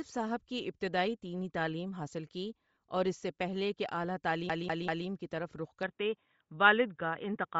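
Bluetooth LC3 compression runs through the whole speech clip, giving it a breathy, grainy top end where the upper spectrum has been thinned and noise-filled, which fits a low LC3 bitrate of around 32 kbps with 7.5 ms frames as the likely cause. Lost LE Audio frames at 2.74 to 2.76 s, just after "دینی تعلیم حاصل کی", leave a roughly 23 ms noisy smear as the decoder recycles the last spectrum, a gap that fits three 7.5 ms frames. A CD stuck on one turn from 4.49 to 5.07 s, just before "کی طرف رخ", repeats the same 0.19 s slice of audio three times with a brief mute at each jump, the quick even stutter of a skipping disc. The input likely switched to a poorer device at 5.83 s, right after "کی طرف رخ", and the sound turns dull and boxy through to the end, with nothing above 3.8 kHz and a faint new background noise. There is no silence at the switch and hardly any level change.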